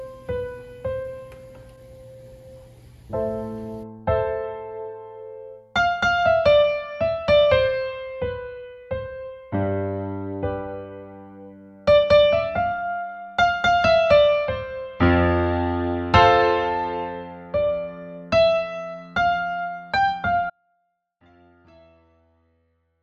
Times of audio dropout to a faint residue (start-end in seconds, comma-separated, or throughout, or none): 20.50-23.02